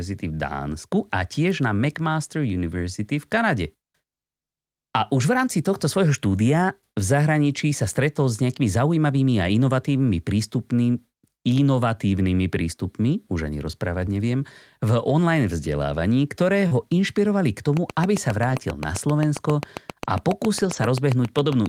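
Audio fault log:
16.67 to 16.73 s, short concealed packet loss: Between "v online vzdelávaní ktoré" and "inšpirovali k", about 40 ms of audio never arrived in time. The receiver covered roughly 35 ms of it by extending the last sound it had. Voiced parts carry on at their pitch. Unvoiced parts become shaped noise. Then it blends back into the real signal. The result is a brief smear or wobble, and a short consonant in that spot can drop out.
16.71 to 16.77 s, 18.49 to 18.59 s, 20.61 to 20.87 s, lost packet rebuilt from error correction: Packets went missing at three points. At the first, 2 packets covering 40 ms were lost, overlapping the concealment just before "inšpirovali k". At the second, 3 packets covering 60 ms were lost. At the third, 7 packets covering 140 ms were lost. Each lost packet was replaced by a low-bitrate copy carried inside the next one. So there is no gap, but these stretches sound rougher and noisier than the surrounding audio. 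The last one is the longest.
17.77 s to the end at 21.68 s, train of clicks: Right after "inšpirovali k", a steady ticking begins and runs to the end. The clicks come at a regular pace of about 7.5 per second. They share much the same shape and peak roughly 10 dB above the signal. They sit on top of the sound and carry on through the pauses. The likely cause is interference from nearby equipment or a faulty connection or power supply injecting a repeating pulse.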